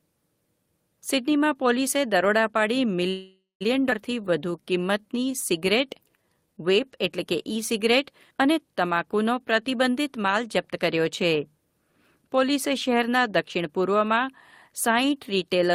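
From 3.09 to 3.63 s there is a call audio freeze: packets were likely held up in transit and the jitter buffer emptied. The receiver stretched the last sound into a fading buzz for about half a second, with roughly 0.19 s of that going silent, before the speech resumed where it stopped, with nothing lost.

At 3.91 to 3.93 s a skip ahead follows, as a stretch of audio was dropped while later audio was already waiting. Around a third of a second of speech is missing, and the two sides of the jump are spliced together almost directly.

From 4.14 to 6.55 s a jitter buffer slow-down sets in. To build up a reserve, the receiver repeated single pitch periods to add 247 ms of audio, so the speech plays at 90% speed at unchanged pitch, with drawn-out sounds.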